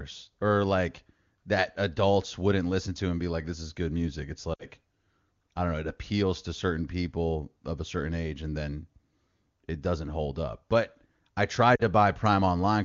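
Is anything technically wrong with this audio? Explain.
Yes, there are lost AMR speech frames at 4.53 to 4.65 s and 11.75 to 11.82 s. The decoder, missing frames, repeats its last good settings with falling gain, so the speech smears and briefly dims over about 60 ms and 40 ms.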